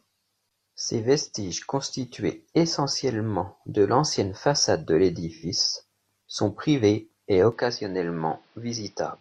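At 5.34 s, just after "de l'ancienne façade de", the speech smears into a brief noisy, phasey patch lasting about 85 ms until 5.46 s. This is AAC frame loss with concealment. A gap of that length fits two lost frames, and the decoder bridged them by reusing the last good spectrum with altered phase or energy. That keeps sound flowing but replaces the real detail with a blurred imitation.

From 7.52 s, right after "sont privés et", the sound abruptly turns duller and boxier, with nothing above 6 kHz, a drop of roughly 5 dB in level and a new noise floor about 35 dB beneath the speech. There is no silence at the change, and the poorer sound continues to the end. The most likely cause is the input switched to a poorer device, such as a headset call profile with a narrower band.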